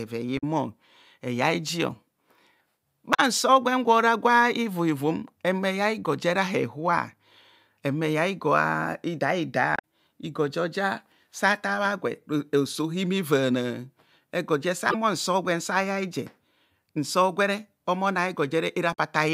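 Damaged data in a compressed stream breaks the speech five times: 0.35–0.44 s, 3.11–3.20 s, 9.76–9.81 s, 14.87–14.95 s and 18.90–18.98 s. Each burst lasts about 50 to 90 ms. Part of the compressed data is wrong in those spots. The decoder misreads the bad frames and loses sync. It then hunts for the next valid frame header. Each event comes out as a short chirp, squawk, click or hole in the speech.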